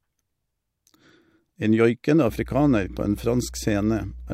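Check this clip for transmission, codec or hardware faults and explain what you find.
One hardware fault is present: mains hum in the second half of the speech.

From 2.28 s until the end, a steady 60 Hz mains hum sits under the speech. Power-line current is leaking into the signal path, most likely through a ground loop or a nearby transformer. It sounds like a constant low drone with some low harmonics. It sits around 15 dB below the speech.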